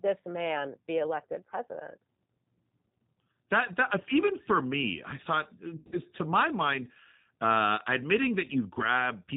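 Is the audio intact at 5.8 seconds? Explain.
No. After "for me I thought", VoIP packet loss concealed by the speech codec runs from 5.76 to 6.00 s. About 140 ms of audio is missing in gaps spread over 160 ms, the longest lasting 60 ms. The decoder extends its last pitch and filter into a fading buzzy tone or coloured noise, which shows as smeared, flattened harmonics on a spectrogram before "to my mind uh" returns. The G.729 codec also applies here, cutting everything above 4 kHz and adding a rough, synthetic edge.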